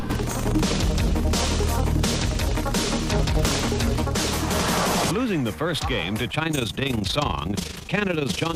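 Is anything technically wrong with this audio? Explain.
Yes. From 6.28 s to the end, overlap-add ripple: frames rejoined with mismatched overlap gain make the level pulse about 11 dB around 30 times a second, a rough flutter.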